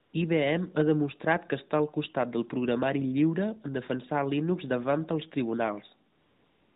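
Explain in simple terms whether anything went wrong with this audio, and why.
AMR comfort noise appears twice: briefly from 0.02 to 0.14 s, and again from 6.12 s to the end at 6.76 s. At these moments the phone decided nobody was talking and stopped sending speech. The receiving phone filled the gap with artificial noise made from a rough summary of the background, so the real room sound is swapped for a smooth, even hiss that switches on and off, and a quiet word ending can be clipped.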